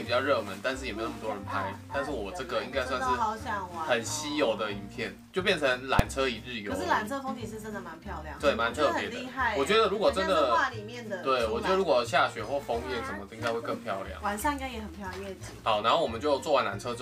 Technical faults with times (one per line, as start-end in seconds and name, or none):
5.99 invalid numbers at full scale